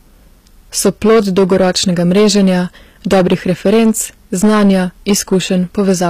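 Speech, with two problems running the full length of the clip. The first is hard clipping: the signal was driven about 10 dB past what a stage in the chain could pass, so the loud parts of the waveform have their peaks cut flat, with something like 7 percent of the samples affected. Those flattened tops generate harmonics well above the fundamental, which is why the louder syllables carry a fuzzy, crackling distortion rather than clean peaks. The second is plainly audible codec damage on the treble, with nothing present above 14.9 kHz. The upper band does not sound like the original spectrum; its harmonics fail to line up with those below, so s sounds come across gritty or metallic. The likely cause is HE-AAC compression, consistent with a low bitrate around 24 kbps. That codec transmits only the lower spectrum and regenerates the top by copying lower bands upward and shaping them with a coarse envelope. 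This spectral band replication fills in the treble, but the result is synthetic rather than a faithful copy of the original high frequencies.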